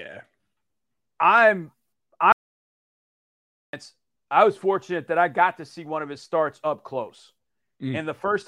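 At 2.32 s the speech cuts off abruptly and the track falls to silence until 3.73 s, when speech resumes mid-flow: an audio dropout to silence lasting about 1.41 s. No room tone survives in the gap, so the input was likely lost, through a disconnection or a mute, while writing continued. On a waveform this is a flat line; a spectrogram shows a fully black vertical band with hard edges.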